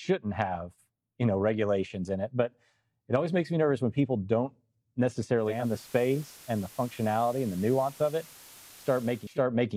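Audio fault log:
5.35–9.44 s, digital radio blending to analogue. The receiver lost its digital stream and cross-faded over 474 ms to the station's FM broadcast, then returned. FM hiss rises to roughly 20 dB below the speech, and the level drops about 1 dB.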